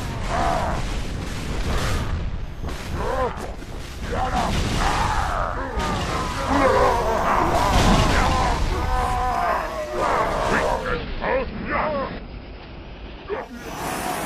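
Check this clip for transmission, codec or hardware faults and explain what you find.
One transmission fault is present: the receiver blends from digital radio to the analogue broadcast. From 10.69 to 13.63 s, the digital stream drops and a hybrid receiver cross-fades over about 0.3 s to the station's AM signal, then returns. During that stretch the treble is cut, so the sound turns dull, the level shifts by about 3 dB, and a faint hiss sits far below the signal. A spectrogram shows the upper band cut between those times, and the waveform shows a small step in amplitude at each blend.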